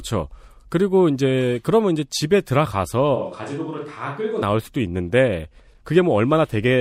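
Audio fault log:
3.17–4.41 s, switch to a distant microphone: speech abruptly turns roomy and thin, about 5 dB quieter with more room noise, likely a far microphone standing in for the close one.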